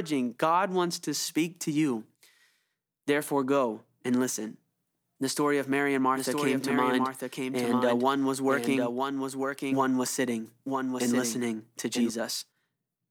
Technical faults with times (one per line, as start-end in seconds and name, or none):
6.16-12.10 doubled audio track